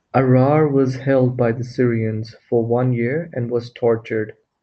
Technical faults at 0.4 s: none

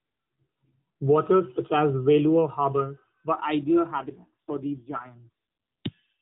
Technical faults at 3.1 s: none

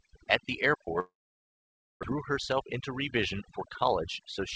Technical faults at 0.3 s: overdone noise removal

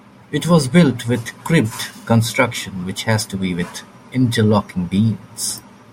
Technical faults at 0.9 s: none

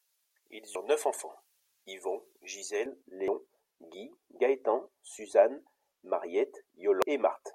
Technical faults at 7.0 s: damaged data in a compressed stream

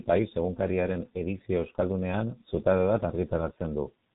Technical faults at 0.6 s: G.723.1 codec

